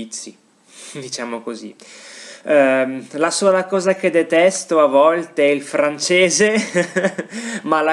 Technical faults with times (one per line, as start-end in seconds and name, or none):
none